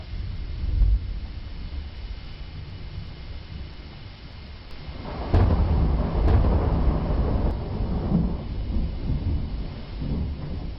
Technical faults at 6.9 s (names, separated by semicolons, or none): doubled audio track